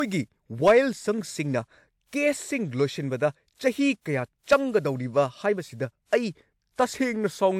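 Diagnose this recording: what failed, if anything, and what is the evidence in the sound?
Generation loss at the codec stage: the speech was likely re-encoded about four times, which fits a 128 kbit/s WMA chain. Each pass requantised on a shifted frame grid. Throughout, it sounds swirly, hollow and smeared beyond that bitrate, with blurred attacks and nothing above 20.1 kHz.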